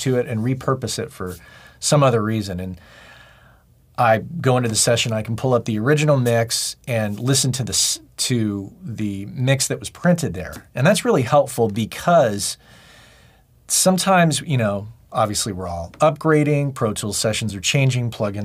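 No technical faults can be heard anywhere in the clip.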